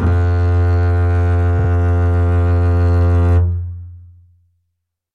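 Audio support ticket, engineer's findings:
Repeated frames, 1.58 to 1.69 s. The music stutters as a 52.2 ms block plays twice more, which fits two compressed frames resent upstream. It adds 104.5 ms.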